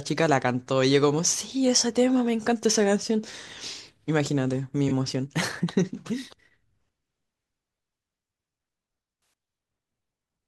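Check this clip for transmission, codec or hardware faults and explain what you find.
Two faults stand out, both corrupt frame concealed. At 3.31 to 3.34 s and 4.88 to 4.92 s, the decoder detected a damaged AAC frame and covered it. Each covers about 30 to 40 ms of speech, consistent with one frame apiece. On a spectrogram, each appears as a narrow faded or smeared vertical band.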